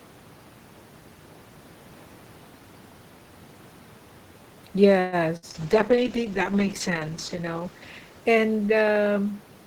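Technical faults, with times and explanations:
4.99 to 5.16 s, call audio freeze: the sound stalls for about 130 ms as a fading buzz or hiss, likely a jitter buffer running dry, then carries on with nothing lost, just pushed later.
5.37 to 5.45 s, burst of packet loss: roughly 60 ms gets patched over with a decaying held buzz or hiss, then the audio jumps ahead, skipping about 60 ms of material.
5.52 to 9.26 s, call bitrate drop: the encoder falls from 32 to 9 kbps, bottoming out for nearly two seconds, so speech turns coarse, watery and dull-topped.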